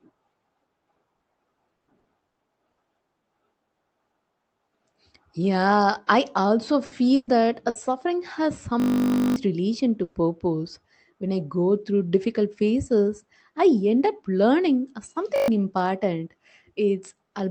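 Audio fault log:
1.15 to 2.80 s, repeated packet loss (robotic sound): choppy speech with pieces missing. Six gaps, the longest 120 ms, were patched by stretching the previous sound.
6.85 to 6.94 s, 7.15 to 7.30 s, 7.69 to 7.78 s and 10.03 to 10.18 s, burst of packet loss: brief held buzz or fading hiss, then a jump ahead. Each burst dropped 60 or 120 ms of speech, which was filled by continuing the last sound.
8.80 to 9.36 s and 15.36 to 15.48 s, system hang loop: a steady 50 Hz buzz. A frozen system replayed one 20 ms buffer 28 and then 6 times, losing roughly half a second and a tenth of a second of audio.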